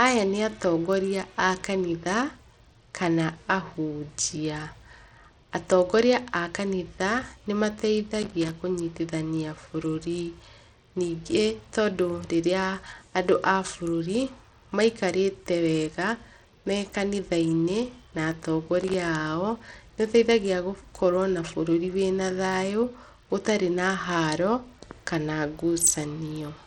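Throughout the speech the top end is thin and unstable: high frequencies come and go, and a gritty grain sits over the whole signal. This is likely Bluetooth SBC compression at a small bit pool, consistent with a bitrate near 80 kbps. SBC splits the signal into a few wide sub-bands and gives them bits without a model of hearing, so the upper bands get starved and the rest are coarsely quantised, which leaves noise and aliasing behind.

From 8.22 to 8.51 s, and again from 18.81 to 18.94 s, irregular bursts of scratchy crackle break through. These are loose connector crackle: a worn or dirty contact making and breaking rapidly, which chops the signal in fragments, with any DC on the line adding pops. The first burst lasts about 0.3 s and the second about 0.13 s.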